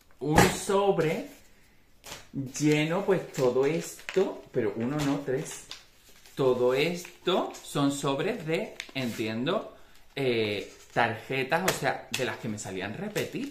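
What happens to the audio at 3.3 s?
Nothing goes wrong at 3.3 s: the sound carries straight through that moment with no dropout, click, distortion or other fault.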